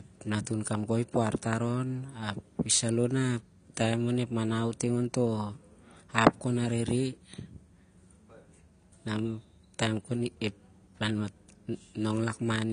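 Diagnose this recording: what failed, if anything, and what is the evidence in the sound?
The codec stage is the likely culprit, with AAC compression damage running through the whole of this speech clip. Nothing is present above 9.6 kHz, so the speech sounds dull and closed-in, and the coding damage is plainly audible as smearing and a warbling, fizzy grain on sustained sounds and sibilants. The encoder lacked the bits to code the full spectrum, so it cut the top off and coarsely quantised what remained. The damage is consistent with AAC-LC at around 32 kbps.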